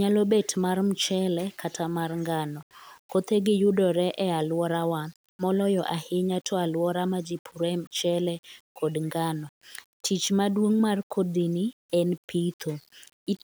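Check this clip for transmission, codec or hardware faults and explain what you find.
Nothing in this speech recording stood out as a transmission, codec or hardware problem on listening.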